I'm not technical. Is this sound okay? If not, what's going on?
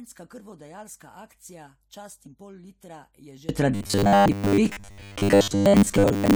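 No. From the start to 3.49 seconds, the speech almost disappears. What's left is faint. The likely cause is one channel inverted. A stereo recording has a left and a right side. Here one side seems to have been flipped upside down. When the two sides are combined, they cancel each other out. Most of the voice is lost, and only small differences between the sides remain.

From 3.75 seconds to the end, the voice turns harsh and metallic, with a steady buzz at 100 Hz. This is robotic sound from repeated short buffers, likely caused by audio arriving too slowly. The software plugs each gap by replaying a tiny scrap, about 10 milliseconds long, over and over. Most of the real sound gets skipped. The repeating scrap creates that fixed buzz, while the speech rhythm still roughly comes through.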